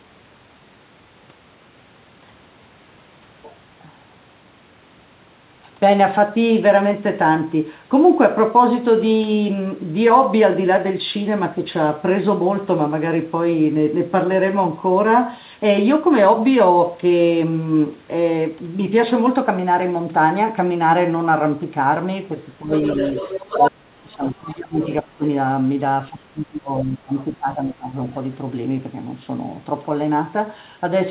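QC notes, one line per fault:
22.59–27.96 s, speech suppressed in double talk: the talker's level dips five times, at 22.59–22.71 s (brief, about 10 dB), 23.56–24.82 s (deepest, about 35 dB, around a second), 25.02–25.22 s (about 20 dB), 26.1–27.16 s (about 25 dB, around a second) and 27.35–27.96 s (about 20 dB, half a second). The likely cause is an echo canceller that couldn't separate the talker from loudspeaker echo while both sides spoke, so it attenuated everything. On the waveform the envelope shows clear notches, and on the spectrogram the talker's harmonics fade or break into gaps below the 4 kHz ceiling, which fits a G.711 mu-law path at 64 kbps.
22.74–24.97 s, other side's voice leaking through: a second voice sits under or between the talker's in three spots. At 22.74–23.71 s it is strongest, about 10 dB below the talker. At 24.48–24.55 s it is a faint scrap about 25 dB down, and at 24.82–24.97 s it is about 20 dB down. 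This is likely residual loudspeaker echo that the canceller failed to remove. On the spectrogram, faint harmonic traces appear that don't follow the talker's pitch, partly filling the suppression gaps, while the waveform shows low-level bursts there.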